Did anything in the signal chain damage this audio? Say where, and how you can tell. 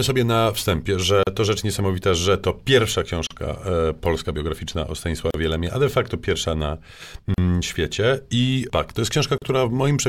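Yes, a gap at a join of encoded pieces, at 1.23, 3.27, 5.31, 7.34 and 9.38 s, at the codec stage. Every 2 s the speech stops for 37 to 38 ms with smeared edges, then resumes where it stopped. Separately encoded pieces were joined untrimmed, keeping encoder delay and padding.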